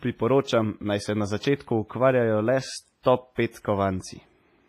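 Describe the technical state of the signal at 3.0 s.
Pre-echo occurs from 3.03 to 3.05 s, spreading over 24 ms. A sharp attack lands late in a transform block. The quantisation noise sized for it fills the quiet gap beforehand. A brief hiss precedes the attack, which sounds softened and smeared.

This sits on heavy WMA compression, likely an older WMA encoder. The damage points to a low bitrate, around 24 kbps. Nothing is present above 15.5 kHz. Weak components are zeroed, leaving a ringing, washy texture with hiss that breathes with the speech.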